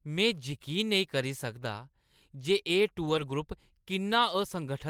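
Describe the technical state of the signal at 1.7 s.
At 1.7 s the speech signal is intact, with no audible fault at that point.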